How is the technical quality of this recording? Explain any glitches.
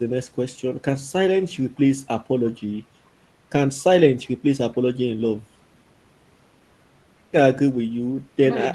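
No glitches can be heard anywhere in this speech recording. It has the character of audio carried over a call link, with the top end rolled off at around 12 kHz, which fits an Opus codec at a modest bitrate.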